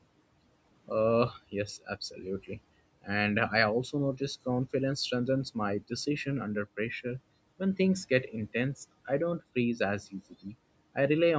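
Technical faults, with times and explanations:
2.11–2.23 s, speech cut by the noise suppressor: the suppressor misjudged a stretch of soft speech as background noise and pulled it down with the room noise, by about 9 dB at its deepest, so roughly a tenth of a second sounds swallowed and faint.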